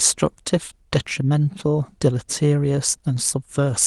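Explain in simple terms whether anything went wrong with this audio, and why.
Nothing went wrong: the speech went through an ordinary internet call connection whose codec trims the highest frequencies above about 12 kHz, as that kind of call link is expected to.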